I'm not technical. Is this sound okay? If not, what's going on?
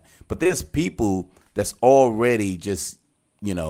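No. Twice in a row, at 0.43 and 0.47 seconds, short concealed packet loss hid missing bits of the call, leaving a brief smear just before "people that's already".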